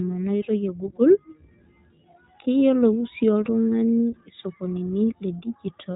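Speech running through the iLBC codec for its whole length, with plainly audible coding damage. Nothing passes above about 3.8 kHz, so the sound is narrowband and lacks sibilant air. Each short frame's excitation is coded on its own, which fits 20 ms frames at around 15 kbps and gives a slightly rough, synthetic buzz. Unlike simple low-pass filtering, the texture itself is degraded, and unlike GSM, there is no smeared, warbling continuity between frames.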